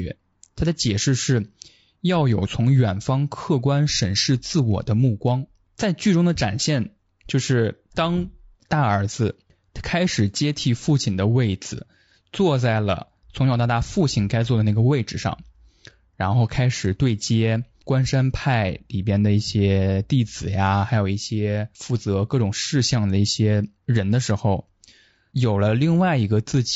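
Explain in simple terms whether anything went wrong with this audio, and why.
Yes, something went wrong, and it lasts the whole clip. The speech sounds rough and grainy, with hiss sitting between the tones of the voice and an artificial top end. That points to low-delay AAC compression, likely the kind used on video calls. Unlike background noise, which stays steady in the pauses, this graininess rides on the voice itself, because too few bits are left to code the voice cleanly.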